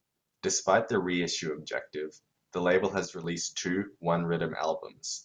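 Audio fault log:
3.05–3.24 s, one channel drops out: just after "reissue objective the label", the level falls abruptly by about 6 dB for 0.19 s, then snaps back. The likely cause is one stereo side briefly going missing before the mono sum. Unlike a full dropout, the sound never goes silent.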